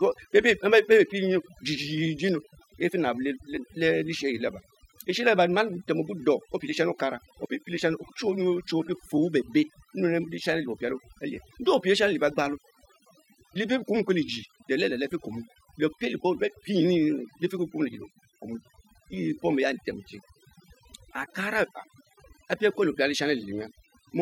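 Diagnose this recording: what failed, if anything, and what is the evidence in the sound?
The failure is overdone noise removal, and it sits in the call processing stage. It runs the whole way through the speech. Between phrases the background drops to near silence, but little twinkling specks keep popping in and out. The suppressor was set too aggressively, so it's switching individual frequency bands hard down whenever they look like its noise estimate, and the quieter parts of the voice get cut along with the noise.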